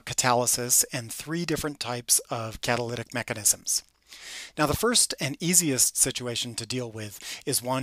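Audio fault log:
No faults heard anywhere in this clip.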